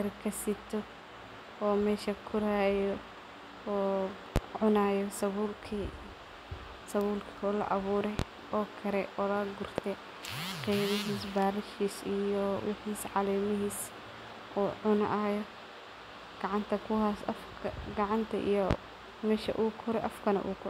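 Speech recording carrying four single loud pops, each about 20 dB above the speech, at 4.36–4.40 s, 8.19–8.23 s (between "laa awuure" and "oo kare oo"), 9.78–9.82 s (after "awuure oo kare oo") and 18.71–18.75 s. They are likely voltage transients from a connector, switch or static discharge.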